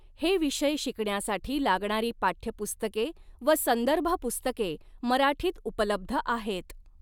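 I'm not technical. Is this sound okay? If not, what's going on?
Yes, this sound is okay, and there's nothing going on that needs fixing.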